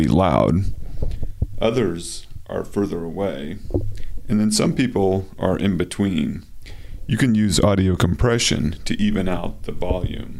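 No faults are audible anywhere in the clip.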